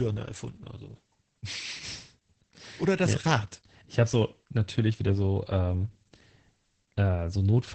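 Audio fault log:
Throughout: Opus voice compression. Nothing is heard above about 8.5 kHz, so the speech sounds muffled and dull, and the heavy coding damage makes it hoarse and slightly robotic. This fits Opus's SILK linear-prediction mode at wideband, at a bitrate around 10 kbps, with the excitation coded too coarsely to keep natural breathiness. A simple low-pass filter would only dull the sound, without this rough, synthetic texture. MP3-style damage would sound swirly and watery rather than buzzy.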